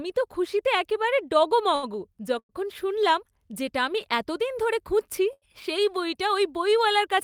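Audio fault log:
1.75–1.86 s and 5.33–5.45 s, short stall from a late packet: Right after "তো খুশিতে একেবারে" the last sound is held for about 74 ms, and right after "আমি এতদিন ধরে খুঁজছি" it is held for about 87 ms, with a slight buzz or dip. A packet arrived late, the jitter buffer emptied, and the receiver stretched what it had until the data came. Speech then resumes where it stopped, so nothing is lost and everything afterwards runs slightly later. Unlike the freeze, neither hold drops into silence.
2.39–2.52 s, call audio freeze: The sound carries on as a buzz or hiss that fades into about 60 ms of silence. The whole hold lasts about 103 ms, and the audio then picks up with "শুনলাম যেটা আমি এতদিন" exactly where it left off. The likely cause is packets held up in transit, which drained the jitter buffer and left the receiver filling the wait. It differs from the short stalls by its length and its fade to silence. 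It differs from a dropout because no speech is missing; it only arrives about 0.1 s later.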